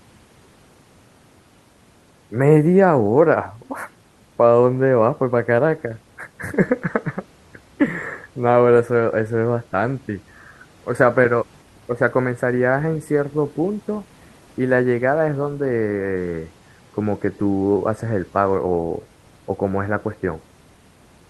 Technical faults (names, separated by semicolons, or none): none